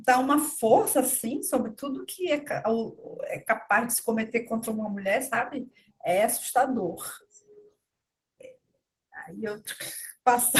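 Opus voice compression affects the whole speech clip. Low-band speech goes through a linear-prediction coder, with a separate layer for the top band. The excitation is coded coarsely. The speech sounds hoarse and slightly robotic, which fits a rate near 16 kbps.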